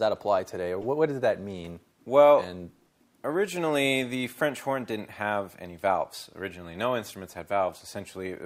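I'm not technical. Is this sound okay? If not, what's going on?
No. There are two corrupt frame decoded glitches, brief chirps at 0.81 to 0.85 s and 7.68 s. Damaged chunks of compressed data played anyway, producing wrong sounds.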